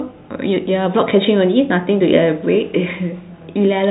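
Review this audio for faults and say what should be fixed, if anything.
Nothing needs fixing: the speech carries ordinary G.711 telephone coding, which stops the band at 3.9 kHz and adds only a faint quantisation noise that follows the signal level, so the narrow bandwidth comes from the format itself.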